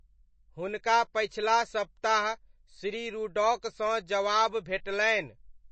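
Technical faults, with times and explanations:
Throughout: MP3 compression, likely from the encoder running short of bits, which fits a rate around 32 kbps for speech. The treble has been cut off at a fixed point, leaving nothing above about 8.3 kHz, so the speech sounds dull and boxed in. Weak frequency lines have been dropped and come back from one frame to the next, giving a plainly audible watery swirl around the voice, and s sounds turn metallic and chirpy.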